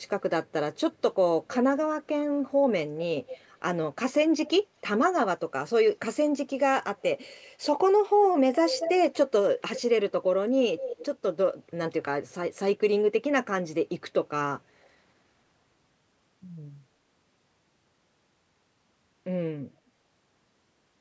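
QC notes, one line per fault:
3.27–3.44 s, 4.46–4.50 s, 8.68–8.91 s, 9.75–9.82 s, 10.77–11.05 s, 14.83–14.89 s: echo leak. A loudspeaker's echo canceller likely let residue through, so a copy of the speech returns about 235 ms late in short scraps, loudest near 8.7 s and barely audible at 14.8 s.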